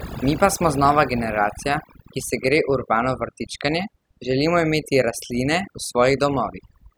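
Overdone noise removal runs through the whole speech clip. A noise reduction stage has been set far too aggressively, so any frequency band that sits close to its estimate of the background noise gets pulled almost to nothing. Quieter parts of the voice fall under that threshold and are stripped away too. The gaps between phrases drop to near silence scattered with twinkling specks.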